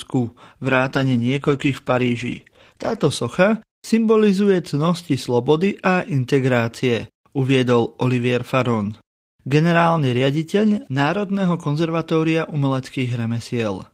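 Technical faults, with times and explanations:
0.62 to 3.19 s, call bitrate drop: the sound turns rough, watery or muffled, which fits the encoder being pushed from roughly 32 kbps down to about 14 kbps and held near that floor for about 2.5 s. With fewer bits, Opus codes more coarsely and trims the high frequencies. Unlike packet loss, nothing drops out or stutters, and unlike a plain low-pass filter, coding artefacts come with the dullness. Quality returns by 3.19 s.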